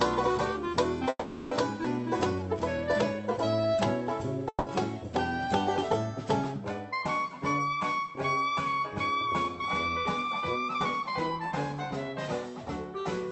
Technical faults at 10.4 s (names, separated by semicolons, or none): jitter buffer speed-up